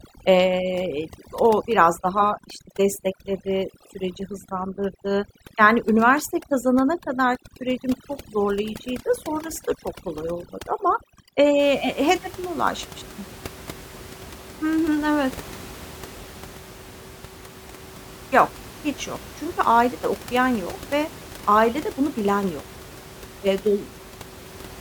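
From the start to about 11.59 s there's overdone noise removal: gating bands near the room noise floor leaves twinkly near-silence, clearing just before "he hedefime ulaşmıştım".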